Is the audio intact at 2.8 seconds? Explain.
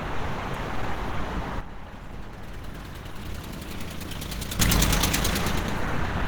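No. At 2.8 seconds the everyday sound sits inside a sudden gain jump running from 1.61 to 4.60 s. The digital gain was most likely switched in one step with no ramp, as when a level setting or bit shift is applied instantly, dropping everything by about 10 dB. The sound and its background noise fall together at 1.61 s and come back up together at 4.60 s, both as abrupt steps rather than fades.

The same moment also carries Opus compression damage that runs through the whole clip. The encoder appears to have been squeezed to a low rate, which fits about 16 kbps, where Opus switches to its hybrid mode and codes the lower band the way it codes speech. Content still reaches 20.2 kHz, but the coding damage is plainly audible: textures come out hoarse and grainy instead of clean.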